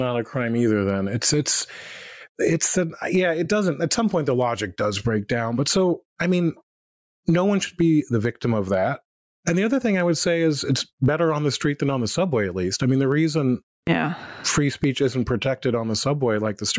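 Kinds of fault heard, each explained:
Gain pumping: the gain swings around 15 dB, and the speech sounds squashed, likely from microphone gain set far too high with a fast limiter pulling it down on loud peaks.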